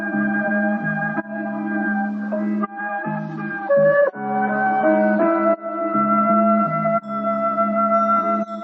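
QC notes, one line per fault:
2.60–6.60 s, adaptive stream at a lower bitrate: the top end suddenly vanishes above 7.4 kHz and codec artefacts thicken, with no gap at either switch, which fits the player falling back from a 128 kbit/s MP3 version to a 32 kbit/s one while the connection slowed.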